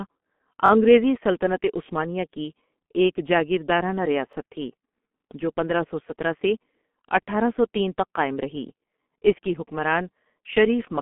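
Speech heard through a G.723.1 codec at 6.3 kbit/s over a 200 Hz to 3.4 kHz telephone band, with nothing above 3.7 kHz. The heavy coding damage from its coarse 30 ms frames and slowly updated voice model leaves the sound muffled and hoarse, with smeared consonants. A repeated buffer occurs at 0.66–0.70 s, just before "انگریزی سلطنت عثمانیہ کی", where a roughly 21 ms chunk plays twice more, and again at 4.33–4.35 s, just after "عثمانیہ کی ایک جاگیردارنہ", with one extra play. Each repeat has a hard join, which fits a 1024-sample buffer that was replayed when new audio arrived late, and no audio appears to be lost.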